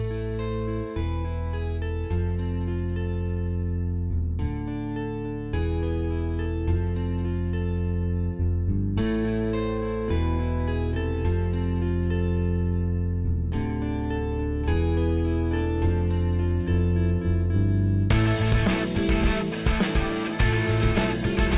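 Nothing goes wrong anywhere in this one; the sound just carries on steadily without a single technical hiccup to point to.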